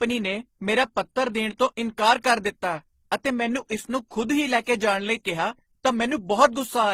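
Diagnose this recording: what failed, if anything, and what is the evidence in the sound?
The failure is at the codec stage, throughout the speech. It sounds like transcoding between lossy codecs. Smeared, swirly artefacts from different coders overlap, and nothing is heard above about 15.9 kHz. The cause is likely a chain such as MP3, then low-rate HE-AAC, then Opus. Each stage re-encoded the previous stage's damage.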